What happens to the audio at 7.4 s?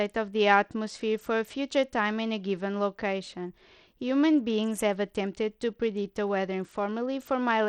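At 7.4 s the speech carries the same gritty, flickering treble heard throughout, likely from Bluetooth SBC compression starved of bits, which fits about 80 kbps. On a spectrogram, the upper sub-bands blink in and out in blocky patches above a grainy noise floor.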